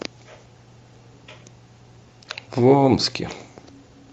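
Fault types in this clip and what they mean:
No faults are present in this speech clip.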